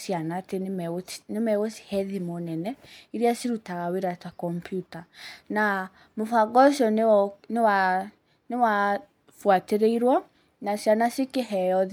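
Speech recording with no technical faults audible anywhere.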